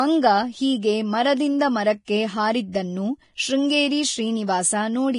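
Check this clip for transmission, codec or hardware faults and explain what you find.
Two faults are audible in this speech recording: heavy compression damage throughout and a brief pre-echo.

Vorbis compression, whole clip: the speech is hissy and grainy, with nothing above 10.5 kHz, which points to a likely low-rate Vorbis encode near 29 kbps. Treble detail was quantised so coarsely that it turned into noise of similar energy, roughening tones and blurring consonant attacks.

Pre-echo, 2.05 to 2.08 s: a short hiss spreads about 29 ms ahead of a sharp onset. The transform block spread its quantisation noise, sized for the loud attack, evenly across the block, including the quiet moment before it, so the attack sounds smeared and softened.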